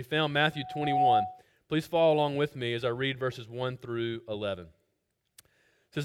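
Loudspeaker feedback squeal runs from 0.52 to 1.42 s: a single 744 Hz tone swells over roughly half a second to about 10 dB above the rest of the audio, because the microphone is picking up its own loudspeaker and the loop gain at that frequency exceeds one, so the tone keeps reinforcing itself.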